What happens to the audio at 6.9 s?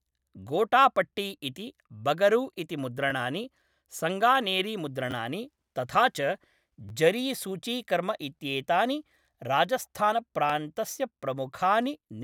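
At 6.89 s, new audio failed to reach the playback device in time, so it replayed its last buffer twice more. This is a repeated buffer fault. The repeated piece lasts about 10.7 ms, which fits a 512-sample buffer, and it sounds three times in a row through 6.91 s, with a hard join at each repeat. Because the piece is so short, the stutter comes across as a brief buzzy click in the speech, and essentially none of the audio is lost.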